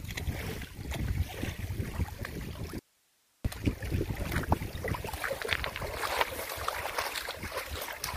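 At 2.79 s the sound cuts off abruptly until 3.45 s. This is an audio dropout to a faint residue: hiss roughly 35 dB down fills the 0.66 s gap, likely because the signal was lost while the path downstream stayed live. Sudden edges and the hiss rule out a pause or fade.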